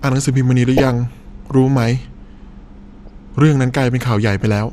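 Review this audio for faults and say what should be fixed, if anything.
Throughout the speech the sound is dull, with a gurgling, granular edge. This is likely MP2 compression at a low rate, around 80 kbps. Starved of bits, the upper sub-bands switch off and flicker, and the remaining bands are coarsely quantised. To prevent it, encode at a higher bitrate or with a more efficient codec.

From 0.77 to 0.87 s, and briefly at 3.06 s, short blips of noise sit over the speech. This is DAB burbling. Bit errors from weak reception, at a fraction of a percent, slipped past error correction and corrupted samples across several frames, so single sub-bands carry short blips of noise. To prevent it, improve reception with a better antenna or stronger signal.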